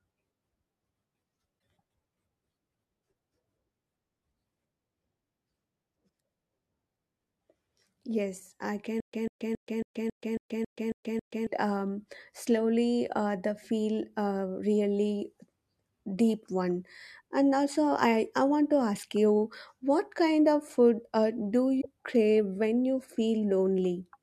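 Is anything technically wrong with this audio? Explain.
Yes. Two kinds of fault are audible in this speech clip.

Damaged data in a compressed stream occurs at 1.56–1.58 s and 21.77–21.86 s. Corrupted frames made the decoder lose sync and hunt for the next header, producing brief glitches. On a spectrogram these show as short broadband smears. The waveform shows abrupt discontinuities.

Stutter with silent gaps runs from 9.00 to 11.47 s. A 144 ms fragment repeats nine times, every 274 ms, with 129 ms of digital silence between repeats. This is likely a stalled player replaying its last buffer. The waveform shows identical blocks separated by flat silent gaps, and the spectrogram shows evenly spaced blank columns.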